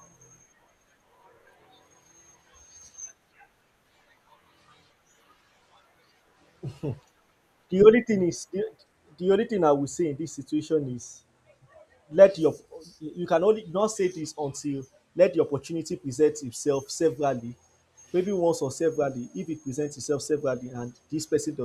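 A faint, fast rattle runs under the speech from 0.15 s to 21.64 s, tiny ticks arriving about every 0.05 s, some twenty a second and several hundred in all, clearest on louder sustained sounds and absent in pauses. These are clock slip clicks, likely from two devices on unsynchronised clocks drifting apart by roughly 400 ppm, so the stream repeatedly drops or repeats what sounds like a single sample each time the mismatch reaches a whole sample.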